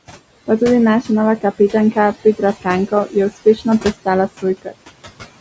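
From the start, the background noise sinks away in the gaps and rises again under the talker. These are noise suppressor artifacts. The suppressor is pulling steady room noise, sitting about 15 dB below the speech, down by about 19 dB frame by frame. Each band it judges to be noise is turned down, so the noise floor pumps with the speech.

Between 2.87 and 3.16 s, then 3.45 to 3.85 s, and again at 4.62 to 4.73 s, parts of the speech sound swallowed, with soft sounds and endings briefly going faint. This is speech cut by the noise suppressor. It mistook quieter stretches of speech for noise and lowered them along with the background by about 12, 15 and 21 dB. Each drop affects roughly a tenth of a second or a little more, and the last one is the deepest.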